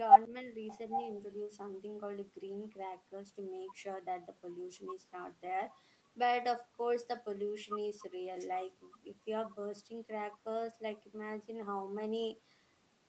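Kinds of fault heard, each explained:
Speech suppressed in double talk: Near 0.3 s the voice briefly dips by about 10 dB for well under a tenth of a second. This is likely the echo canceller, facing both sides talking at once, turning down the talker's speech along with the loudspeaker echo.
Echo leak: From 0.95 to 1.03 s a faint delayed copy of the voice surfaces, around 15 dB below the speech and trailing it by 810 ms. This likely comes from a loudspeaker on one side of the call whose echo canceller let part of the microphone pickup through.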